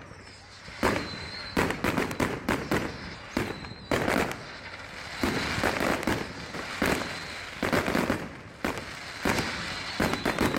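At 3.14 s and again at 6.53 s there is a brief glitch of damaged data in a compressed stream. Corrupted bytes in the encoded data leave the decoder unable to read a frame properly, so it misreads or drops frames while it hunts for the next valid frame header and regains sync. Each blip lasts under 20 ms.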